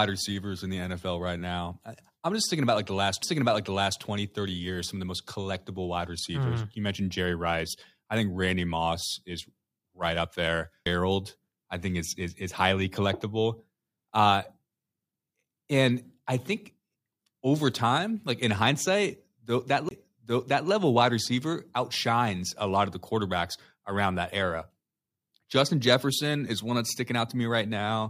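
The laser loses its track three times and lands on a different turn of the disc's spiral, a CD skip. Each time, playback mutes briefly and resumes elsewhere in the speech: a short tick at 3.23 s, a roughly 15 ms gap at 10.85 s, and about 20 ms from 19.89 to 19.91 s.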